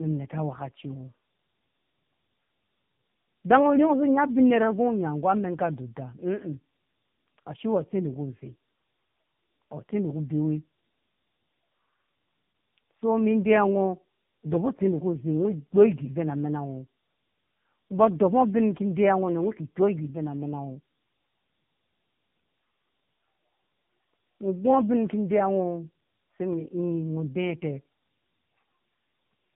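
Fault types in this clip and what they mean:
Tandem speech coding: the speech was decoded and re-encoded between two low-rate speech coders, so the second coder compressed the first one's errors and added its own. The result is rougher and more warbly than one pass, which fits AMR-NB at 12.2 and then 6.7 kbit/s with a G.711 leg between them. A spectrogram shows a hard ceiling at 3.7 kHz throughout, with smeared, blotchy harmonics; the waveform envelope shows little of it.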